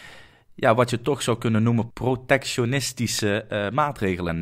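A speech clip with one loud pop at 3.19 to 3.21 s. It sits roughly 10 dB above the speech, which continues underneath. A likely cause is a voltage spike from a plug, switch or static discharge.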